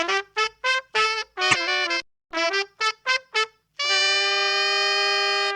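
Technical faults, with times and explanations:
1.48–1.55 s, damaged data in a compressed stream: a brief glitch cuts into the sound because corrupted bytes leave the decoder misreading frames and losing sync until it finds a valid header. The waveform shows a short discontinuity.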